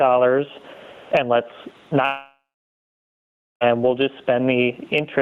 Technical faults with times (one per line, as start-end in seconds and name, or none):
0.00-5.21 gain pumping
2.05-3.71 long network dropout